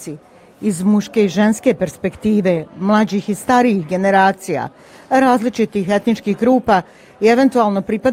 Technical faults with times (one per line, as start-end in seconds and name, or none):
none